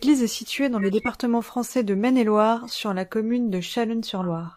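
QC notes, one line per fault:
0.78–1.08 s (after "située dans"), 2.55–2.70 s (before "sur la commune"), 4.22–4.26 s: corrupt frame decoded. Chirpy, noisy bursts, loudest in the first. Damaged compressed frames were decoded anyway, and the misread gains put energy at the wrong frequencies.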